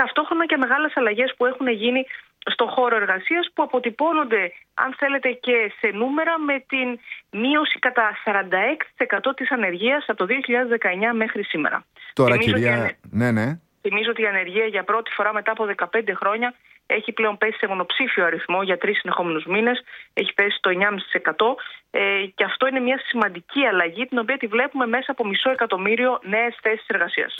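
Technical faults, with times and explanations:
No technical faults detected.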